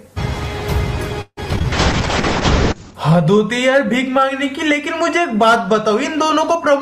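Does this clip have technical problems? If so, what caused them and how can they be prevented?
Yes. From 1.21 to 1.66 s there is repeated packet loss, heard as a robotic sound. Several short dropouts follow one another closely, the longest about 157 ms. Each hole is bridged by stretching the previous audio, so nearly half of this stretch is synthetic fill and the rest is choppy, with pieces missing outright. Prevent it by giving the call a more stable network path and a larger jitter buffer, with forward error correction enabled.

Just after, from 1.72 to 3.01 s, a call bitrate drop makes the audio coarse and dull. The sound points to the encoder being pushed from around 32 kbps down to about 6 kbps. At that rate the upper frequency limit falls from 20 kHz to 8 kHz, and the roughest, most muffled part lasts about 1.2 s before quality returns. Prevent it by reserving enough bandwidth and tuning congestion control to avoid sharp rate cuts.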